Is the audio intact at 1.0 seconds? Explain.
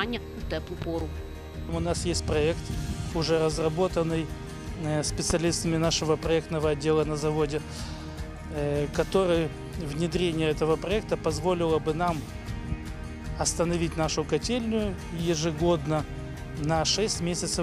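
No, not quite. Between about 0.82 and 1.03 s there's a loud pop, actually a pair of them in quick succession, so 1.0 s sits right inside it. They jump out well above the sound, peaking roughly 10 dB over it, while the audio keeps running underneath. That's likely a voltage step or spike getting into the chain, from a plug, a switch or static, which the downstream circuitry turns into a sharp thump.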